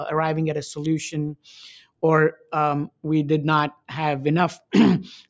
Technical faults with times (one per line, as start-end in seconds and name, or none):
0.00-5.30 noise suppressor applied to music or sounds
1.81-2.02 sound cut by the noise suppressor
2.36-2.52 sound cut by the noise suppressor
2.88-3.05 sound cut by the noise suppressor